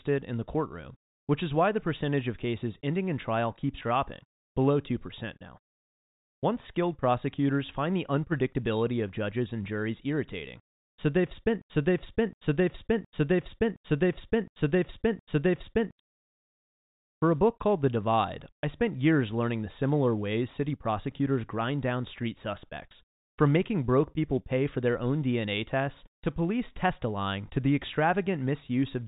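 Speech over a telephone-band line, with a broken-record loop from 11.6 to 16.0 s: after "juries irritating so they've", a 0.72 s fragment repeats six times, likely from a stalled stream resending its last piece, so the intended audio is lost.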